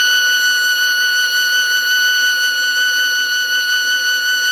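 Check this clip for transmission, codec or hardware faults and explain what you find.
One codec fault runs through the music from start to finish: generation loss. It sounds swirly, hollow and smeared, and attacks blur. The likely cause is repeated Opus re-encoding, around seven passes at what sounds like 64 kbit/s. Each pass requantises on a shifted frame grid, so noise accumulates. Content still reaches about 20.4 kHz.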